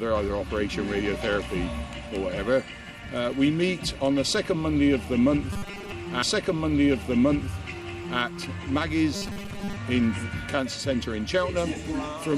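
From 5.53 to 5.93 s, and again from 9.15 to 9.77 s, the sound turns to a rigid metallic buzz at 200 Hz: robotic sound from repeated short buffers. The likely cause is starved input, with roughly 5 ms buffers looping over most of the audio.

From 6.22 to 8.21 s, a stream segment is repeated. About 2 s of programme plays a second time, with a small blip at the jump back.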